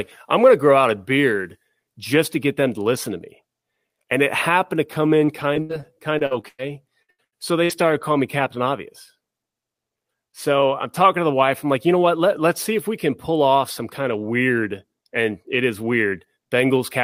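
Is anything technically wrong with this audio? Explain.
Yes, there's a stretch of repeated packet loss (robotic sound) in this speech from 5.25 to 8.57 s. Packets kept dropping or arriving late, a dozen or so holes in quick succession, the longest about 101 ms. Each gap got papered over by stretching out the last bit of sound, so roughly a fifth of that span is concealment. To the ear it turns choppy, with little chunks missing.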